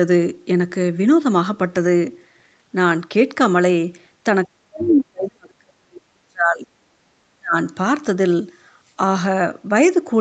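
From 4.46 to 6.66 s the speech sinks by as much as about 40 dB, in pieces over roughly two seconds, likely speech suppressed in double talk as an echo canceller ducked both sides. Unlike a network dropout, it dips and recovers in patches. At 4.79 to 4.97 s the other side's voice leaks through, a scrap about 15 dB below the speech, distinct from the talker's own voice. A shorter suppression, about 30 dB deep, follows at 7.38 to 7.56 s. Throughout, the call path's Opus coding stops everything above 8 kHz.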